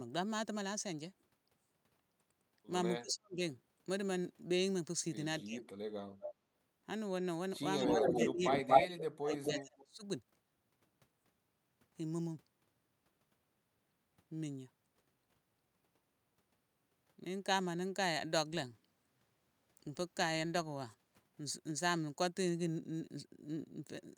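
At 3.0 to 3.4 s and again at 5.44 to 5.66 s, the speech sinks abruptly, by about 40 dB and then about 20 dB. This is speech suppressed in double talk, likely from an echo canceller that could not separate the near talker from the far-end echo while both were active, so it attenuated everything. On a waveform these appear as sudden narrow pinches in the envelope. On a spectrogram they show as brief pale vertical gaps.

From 6.21 to 6.34 s an echo leak appears: a faint delayed copy of the speech trailing by 231 ms, about 10 dB below it. It likely comes from a loudspeaker-side canceller letting its microphone pickup return down the line. It recurs at 7.79 to 8.28 s at about equal level, at 8.48 to 8.99 s about 10 dB louder than the direct speech, and at 9.3 to 9.61 s about 5 dB under it. A spectrogram shows duplicated harmonic patterns offset 231 ms to the right.

Overlapping these, from 7.83 to 10.04 s, double-talk suppression returns for roughly two seconds, cutting the speech by up to about 25 dB. 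The speech dips while the echo keeps returning, and the waveform shows a hollowed stretch.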